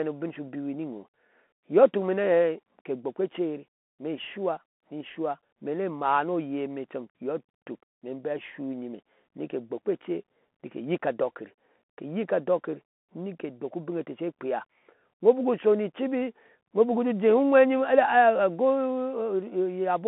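A speech recording that has been through the Bluetooth CVSD headset codec from start to finish. The band runs only from about 200 Hz to 3.5 kHz, so the sound is thin and boxy. What separates this from a plain telephone-band filter is the one-bit delta coding: a steady granular hiss sits beneath the speech, s sounds come out scratchy, and loud bright passages smear where the adaptive step cannot keep up. All of this fits a 64 kbps CVSD link.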